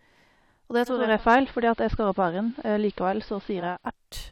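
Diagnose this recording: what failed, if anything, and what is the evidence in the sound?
The fault lies in the broadcast reception stage, where a hybrid receiver dropped its digital stream and blended over to the station's AM analogue signal. That is a digital radio blending to analogue. At 0.86 s the sound cross-fades over about 0.39 s into a dull, band-limited version, a level shift of about 5 dB, and a hiss floor roughly 35 dB under the speech. At 3.91 s it blends back to the full-bandwidth digital audio.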